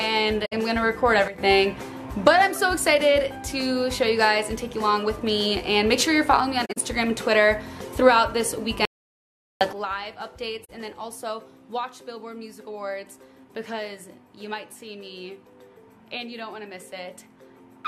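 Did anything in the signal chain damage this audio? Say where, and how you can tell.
Yes. The codec stage shows corrupt frame concealment at 0.45 to 0.53 s, 6.65 to 6.77 s and 10.64 to 10.70 s. Each is a soft-edged dip or smear lasting roughly 80 ms, 125 ms and 57 ms, with no timing shift. The lengths fit a few consecutive AAC frames whose damaged bits the decoder caught. It then muted or rebuilt each frame from a scrambled copy of the last good spectrum.

Two sudden gain jumps point to the sample-format or processing stage. At 1.28 s the sound and background noise drop together by about 10 dB and return at 1.38 s. At 9.73 s a second step of about 13 dB down begins and holds to the end of the clip. Each change happens from one sample to the next, with no ramp, so it is likely a gain setting or bit shift applied abruptly in the digital path.

An audio dropout to silence runs from 8.85 to 9.61 s, about 0.76 s. 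The sound cuts off mid-flow and the gap is silent with no room tone, then the sound resumes with nothing in between recovered. That pattern places the fault at the input or driver stage. The likely cause is a lost device or link, or a stray mute, while the recorder kept writing silence.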